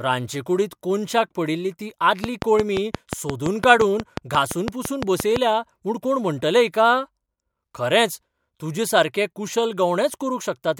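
Interference from nearby equipment or a faulty connection or power supply is the likely source of the train of clicks running through this speech recording from 2.24 to 5.37 s. Pulses of nearly identical shape arrive at a regular 5.8 per second, around twenty in all, peaking about 15 dB above the speech. They sit on top of the voice as a steady ticking that stays exposed in the pauses between phrases.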